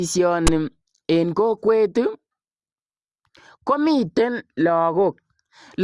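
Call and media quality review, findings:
File tags played as audio at 0.47 s: brief hard-edged rasp, offset to one side, from a text tag block decoded as samples by the file reader.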